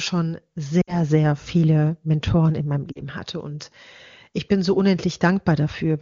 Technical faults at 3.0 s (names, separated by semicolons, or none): lost AMR speech frames